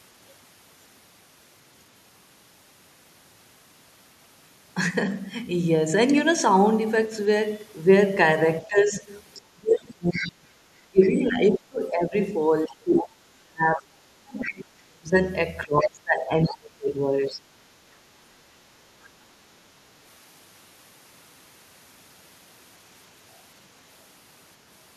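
A speech recording whose trouble starts at 8.63 s, when the talker's voice begins sinking and breaking up in pieces until 17.38 s. Over roughly seven seconds of that stretch it falls by as much as about 30 dB, and the likely cause is speech suppressed in double talk: with both ends talking at once, the echo canceller could not tell the local talker from loudspeaker echo and turned everything down. Unlike a simple level fade, the dips come and go with the overlapping talk. In the same window the other side's voice leaking through can be heard: a second voice at 9.34 to 11.07 s, sitting about 10 dB under the talker; a brief scrap at 14.41 s, around 15 dB down; and a faint passage from 15.8 to 17.35 s, roughly 20 dB below. This is likely uncancelled loudspeaker sound reaching the microphone, and it differs from crosstalk on a shared line because it tracks the far end's playback. At 17.69 to 18.1 s comes background gated by the echo canceller, a short hole of about 6 dB, lasting a few tenths of a second, where the room tone itself drops and then returns. 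Because the talker is not the one being squeezed here, it is the ambience that ducks, not a double-talk cut. From 18.96 s to the end there is a switch to a distant microphone: the voice turns abruptly hollow and roomy, about 10 dB quieter, with room noise only about 30 dB under it. The likely cause is the close microphone dropping out and a farther one taking over. The instant change in tone and distance separates this from gradual reverb or gain drift.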